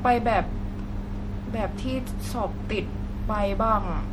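From start to finish the speech has a watery, swirly quality with smeared consonant attacks and a dulled top end, which sounds like MP3 compression squeezed hard, likely fitting something near 64 kbps, where weak frequency lines drop in and out between frames.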